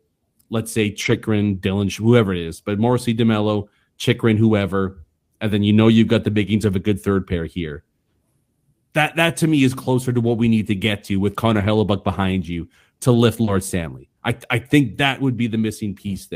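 A speech recording with four stretches of lost packets rebuilt from error correction, at 1.01–1.15 s, 10.23–10.29 s, 11.59–11.65 s and 13.47–13.49 s. The sound never drops out there but turns rougher and noisier for about 80 ms, 40 ms, 40 ms and 20 ms, because the decoder plays a low-bitrate backup copy carried in the following packet. At 13.43–13.49 s there is a short concealed packet loss. About 40 ms with no backup was filled by extending the preceding sound, heard as a brief smear or wobble rather than noisy grain.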